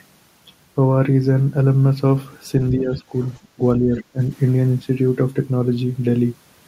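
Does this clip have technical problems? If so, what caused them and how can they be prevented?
Yes. Speech suppressed in double talk occurs at 2.71 to 3.14 s, 3.55 to 3.61 s and 3.80 to 4.18 s. The speech dips slightly in the first stretch and then drops by up to about 25 dB. The likely cause is an echo canceller that cannot separate local speech from loudspeaker echo and ducks both. A headset or a canceller with better double-talk detection prevents it.

The other side's voice leaks through faintly at 3.24 to 3.38 s and more clearly at 3.98 to 4.04 s. It is likely far-end audio from the loudspeaker that the echo canceller left in the microphone signal. Lowering the loudspeaker volume, using headphones or improving echo cancellation prevents it.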